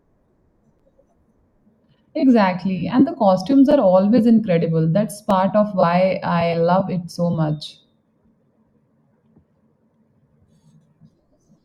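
At 0.79 s the speech drops out for about 6.7 ms. This is a block of digital silence: a run of samples replaced by zeros, as when the output buffer is not filled in time. The signal cuts straight to nothing and back with no fade. Because the hole is so short, it is heard as a tick. The same fault recurs at 3.71 s, lasting 5 ms, and at 5.30 s, lasting about 1.2 ms, each a small tick.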